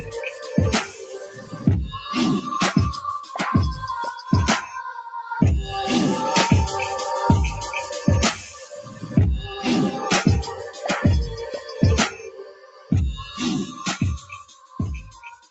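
A noise suppressor applied to music or sounds runs through the whole clip. A speech-oriented suppressor treats sustained tones, ambience and decays as noise, so the level swings by around 10 dB as attacks pass and held material sinks, giving a pumping, thinning character. The sound is cut by the noise suppressor at 0.3–1.65 s (about 10 dB down), 3.21–3.36 s (about 7 dB), 4.18–5.31 s (about 8 dB), 8.51–9.08 s (about 10 dB), 10.54–10.85 s (about 10 dB) and from 11.43 s to the end (about 15 dB, the deepest). In each stretch the steady or fading parts drop away or have their tails shortened, and transients mostly survive. The top end stops near 8 kHz, as expected from the call codec path.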